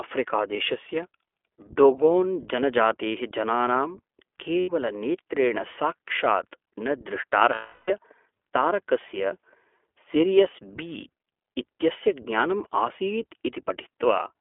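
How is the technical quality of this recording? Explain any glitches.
The recording is clearly compromised: it's speech squeezed through a narrowband voice codec, with two dropouts where audio went missing.

The iLBC codec sits over the whole clip, and its damage is plainly audible. The line band only runs from about 300 Hz to 3.4 kHz, so everything is thin and boxy with no top end. iLBC rebuilds each short frame's excitation from scratch, probably in the 15.2 kbps mode with 20 ms frames, which gives the speech a slightly rough, synthetic edge even where it stays intelligible.

There are two spots of lost iLBC frames. The first runs from 4.60 to 4.70 s and lasts 80 ms. The second, from 7.54 to 7.91 s, lasts 340 ms. When packets go missing, the decoder fills the hole by repeating the last pitch cycle mixed with noise. The short gap comes out as a brief held, buzzy vowel. The longer one drones on noticeably and fades as the concealment runs out. 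Since each frame decodes on its own, the speech snaps straight back afterwards.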